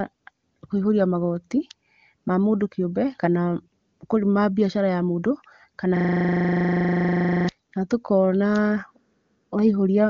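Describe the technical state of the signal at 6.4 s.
At 6.4 s the signal is caught in a system hang loop, running from 5.97 to 7.49 s. The machine stalled while the hardware replayed one 40 ms buffer. It repeats exactly at 25 Hz, heard as a steady, rough buzz.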